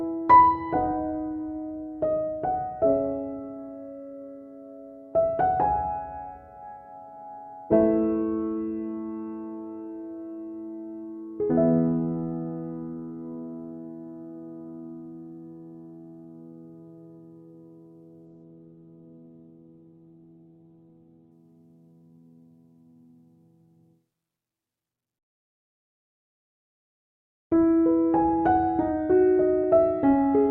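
At 18.31 s there's a call bitrate drop that lasts until about 21.43 s. The bandwidth estimate dipped and the encoder was pushed down to far fewer bits. The coarseness fits a fall from roughly 48 kbps to about 15 kbps. The top end gets chopped too, with the band narrowing from 20 kHz to about 4 kHz, so for roughly three seconds the audio sounds muffled and grainy before it opens back up.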